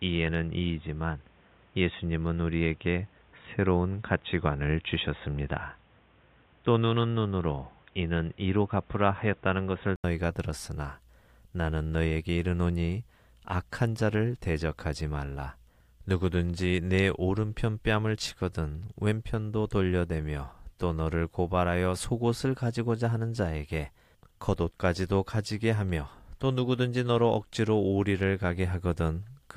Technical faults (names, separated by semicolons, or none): input switched to a poorer device